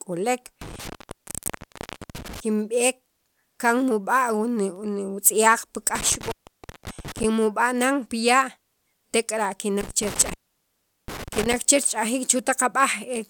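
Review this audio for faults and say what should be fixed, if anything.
Intermittent contact cuts the speech at 0.61–2.40 s, 5.95–7.24 s and 9.81–11.56 s, with the connection open for about 1.28 s, 0.56 s and 0.75 s. A loose plug or cable breaks the signal, leaving crackle at each edge and faint hiss in between. On a waveform the level collapses to a thin floor between spiky edges. On a spectrogram each gap shows as a dark block bounded by vertical broadband streaks. Reseating or replacing the cable and securing its connectors would prevent this.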